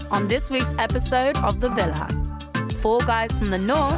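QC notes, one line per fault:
No technical faults are audible at any point in the signal.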